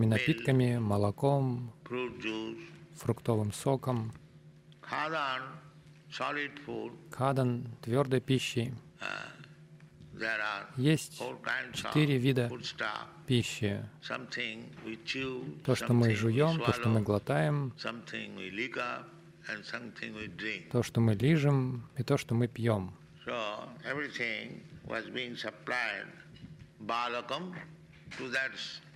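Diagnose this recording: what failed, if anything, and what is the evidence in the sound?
Nothing in the signal points to a failure at any stage, from the analogue wiring and converter through buffering, format conversion, processing, transmission and storage to playback.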